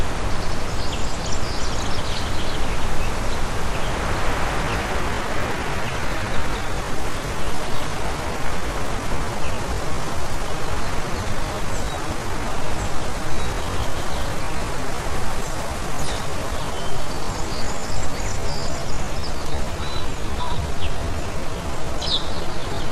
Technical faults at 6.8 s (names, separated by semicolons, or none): time-stretched section